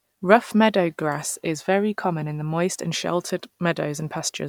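Speech recording with no technical faults audible anywhere in the clip.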